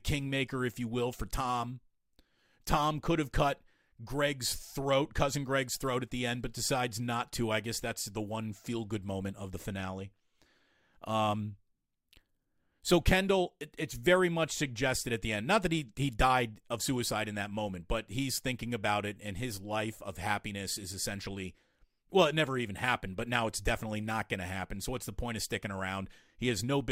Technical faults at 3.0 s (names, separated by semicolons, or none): none